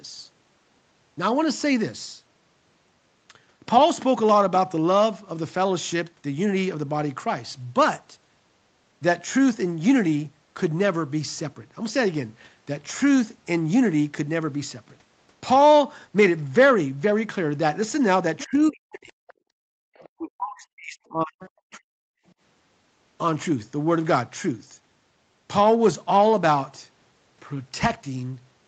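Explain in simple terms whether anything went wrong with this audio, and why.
A few things go wrong in the stretch between about 18 and 22 seconds, and they're all tied to the call's echo handling.

First, there's the other side's voice leaking through. Faint scraps of a second voice come in at 18.38 to 18.72 s, 19.11 to 19.34 s, 19.94 to 20.09 s and 21.4 to 21.5 s. They sit well below the main talker, very quiet in the later bits. The likely cause is that the talker's device was playing the far end on a loudspeaker, and the echo canceller didn't scrub all of it out of the microphone.

Second, there's speech suppressed in double talk. From 18.45 to 19.25 s, and again from 20.17 to 21.95 s, the main talker's voice sinks hard, at times almost to nothing, and it does so in pieces across most of each stretch. That overlaps the leaked voice, so both sides were talking at once. The canceller likely couldn't tell its own talker apart from the loudspeaker echo and turned everything down.

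Third, there's background gated by the echo canceller. From 19.53 to 19.89 s the room sound itself drops away almost completely for a bit under half a second, then comes back. That's the canceller clamping the microphone while the loudspeaker was playing and releasing it once it let go.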